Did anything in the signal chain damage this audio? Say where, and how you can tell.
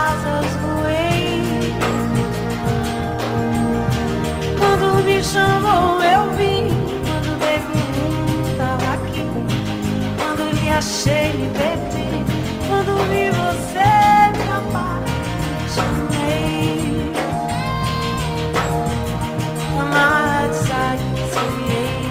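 No, nothing in the signal chain audibly damaged this audio. No stage between capture and playback leaves a mark that can be heard.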